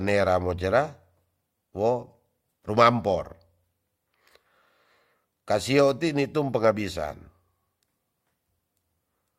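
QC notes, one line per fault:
No faults detected.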